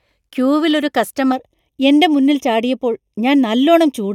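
From 1.32 s to the end, the speech turns hollow and phasey, which points to a channel delay with comb filtering. One channel runs late by roughly a third of a millisecond, and when the two are summed to mono the shared content cancels at evenly spaced frequencies. The first notch falls around 1.5 kHz. Unlike a flanger or phaser, these notches stay fixed, so the coloration is constant rather than sweeping.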